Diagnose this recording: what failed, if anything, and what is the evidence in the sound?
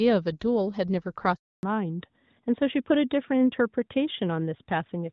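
Stage: network. A handover gap opens at 1.35 s. The speech fades within a few tens of milliseconds and stays silent until 1.63 s, a gap of 280 ms. No speech frames arrived while the call moved from one network to another. The decoder had nothing to play, so the speech in that stretch is lost rather than muffled. Sound returns once the new link starts carrying frames.

Stage: codec, set by the network. From 1.63 s to the end there is a fallback to narrowband. Before the gap, the speech carries the light coding texture of the AMR wideband (HD Voice) codec, which fits a rate near 12.65 kbit/s. After it, nothing above 4 kHz remains. Sibilants lose their edge. The tone turns duller and rougher. This points to the new link switching to AMR narrowband, near 12.2 kbit/s.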